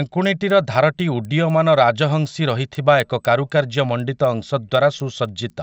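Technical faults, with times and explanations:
Throughout: resampler restarted on every block. The speech carries small, evenly spaced ticks at 4.0 Hz, one every 250 ms. This fits a 16 kHz to 48 kHz conversion run separately on each block, so every block edge is interpolated without its true neighbouring samples and picks up a slight error. Unlike buffer dropouts, nothing is missing and the timing never drifts. The ticks appear only while speech is present and vanish in pauses.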